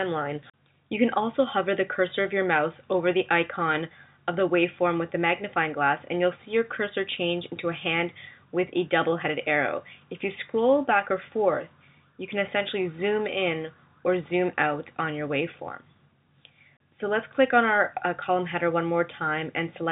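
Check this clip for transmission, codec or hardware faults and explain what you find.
No transmission, codec or hardware faults turn up in this clip; it carries the narrowband sound of a G.711 mu-law call path, with nothing above 4 kHz.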